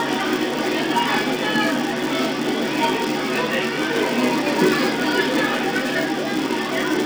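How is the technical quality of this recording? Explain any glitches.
The recording has one fault running through the whole clip. The filter is restarted on every block throughout, so the filter loses its stored state at each block boundary and begins again from silence. Each restart leaves a small transient, and these repeat steadily to form a buzz at 375 Hz, which fits a 128-sample block. The buzz sits on top of the sound and rises and falls with its level, louder in busier passages and fading in quieter ones.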